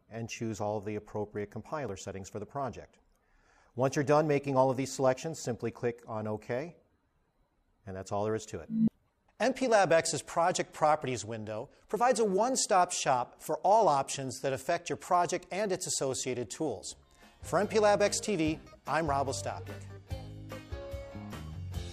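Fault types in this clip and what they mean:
Dropped buffer (overrun): a jump at 1.89 s where the sound skips ahead with no gap, likely a very short slice lost and its edges butted together rather than replaced by silence.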